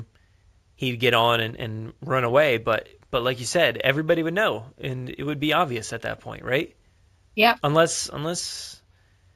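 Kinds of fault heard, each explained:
Imaging from linear upsampling: the rate was raised by joining the original samples with straight lines, which filters badly. The sound fits a 16 kHz source stretched to 48 kHz. The top of the speech band sounds a bit dull, and a faint mirrored copy of the spectrum sits between 8 kHz and 16 kHz, roughly 25 dB below the signal. It shows up throughout as a light metallic shimmer on sibilants.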